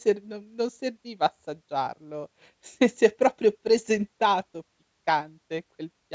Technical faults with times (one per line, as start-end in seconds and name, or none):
none